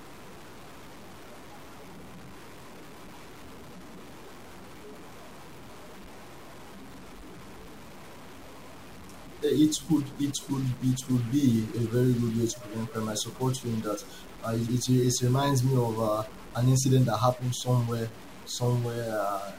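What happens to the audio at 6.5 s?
At 6.5 s, as throughout, harsh buzz coats the speech and fills pauses, likely a stuck bit offsetting samples by about -40 dBFS. Clipping would spare quiet passages.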